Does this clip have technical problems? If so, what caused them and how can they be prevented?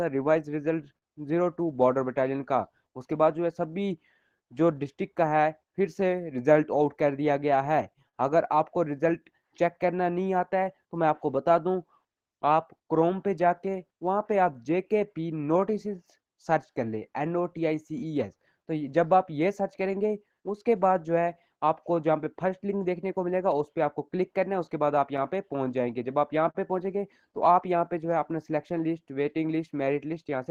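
Yes. Clock drift between sender and receiver runs through the whole clip. The sender's clock is likely roughly 4 percent slow, so the receiver's jitter buffer keeps draining. Locking both ends to a common clock, or using adaptive resampling, prevents it.

Repeated timing corrections run from 0.17 to 30.39 s. The receiver keeps stretching the sound to keep pace, playing at 97 percent speed and adding about a second overall. Smooth resampling instead of cut-and-repeat edits would hide this.

A short stall from a late packet occurs between 0.98 and 1.05 s. The buffer ran empty, so the last sound was held for 38 ms and then resumed with nothing lost. A slightly deeper jitter buffer would absorb it.

Scattered short gaps appear from 4.14 to 9.46 s, 13.66 to 16.65 s and 23.51 to 29.41 s. Each stretch has a handful of tiny holes, the longest about 40 ms in the first and last stretches and about 15 ms in the middle one. 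Each hole was patched by continuing the last sound, which leaves brief ticks or smears. Fixing the drift and stabilising network delay would prevent them.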